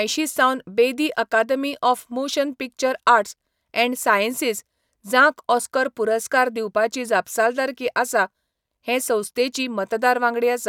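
Nothing here needs pointing out, since no technical faults turn up anywhere in this speech recording.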